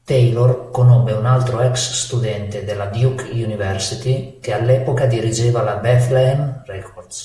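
Nothing in this bit of speech points to a technical fault, so there's nothing to flag here.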